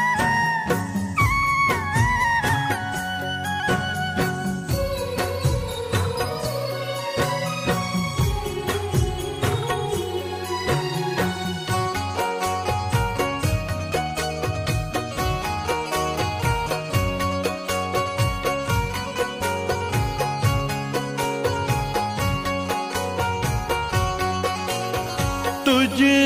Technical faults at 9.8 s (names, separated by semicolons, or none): none